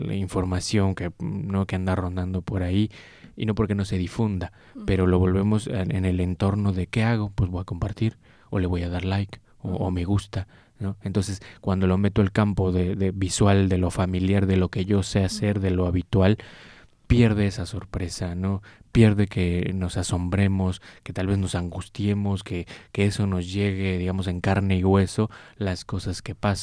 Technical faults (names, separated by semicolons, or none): none